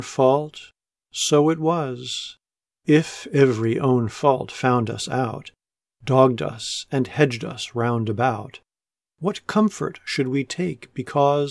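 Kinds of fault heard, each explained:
No kinds of fault are heard, so there is nothing to explain.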